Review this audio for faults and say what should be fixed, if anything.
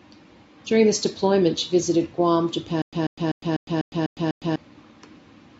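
From 2.82 s to 4.56 s the speech turns into a stutter with silent gaps: a 141 ms fragment repeats seven times, each followed by about 108 ms of digital silence, giving an even 248 ms cycle. This likely comes from a stalled stream whose retries replay the last buffered chunk and then run dry, so the speech that belonged there is lost. The identical repeated burst and the strict rhythm set it apart from random packet-loss dropouts. Larger jitter buffering and a network-stall recovery that resumes playback, rather than replaying stale audio, would prevent it.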